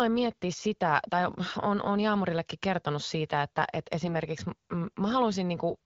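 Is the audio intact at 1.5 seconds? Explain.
No. From 1.46 to 1.52 s, right after "miettiä sitä tai" and before "on on", the speech turns briefly hoarse and gargly while keeping roughly its pitch and level. These are AMR bit errors: on the AMR wideband (HD Voice) stream at 12.65 kbit/s, about 7 percent of the weakly protected bits arrived flipped across a span that fits about three frames. The excitation pulses landed in wrong positions and the fine pitch, gain and spectral values were decoded wrongly.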